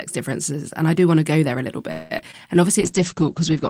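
A call audio freeze runs from 1.91 to 2.12 s: the speech stalls into a fading, buzzy continuation, likely because delayed packets emptied the jitter buffer, inserting about 0.19 s without losing speech. Short concealed packet loss follows at 2.18 s and 2.31 s, where roughly 20 ms each went missing and was patched by extrapolation, heard as brief smears. A call bitrate drop begins at 2.82 s and lasts to the end: the encoder falls from 40 to 9 kbps and bandwidth narrows from 20 kHz to 8 kHz, so the speech turns muffled and rough.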